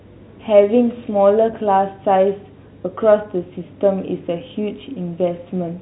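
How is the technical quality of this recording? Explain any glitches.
No glitches can be heard anywhere in the recording. The speech carries the narrow band of G.711 telephone coding, with nothing above about 3.9 kHz and the codec leaving at most a faint trace.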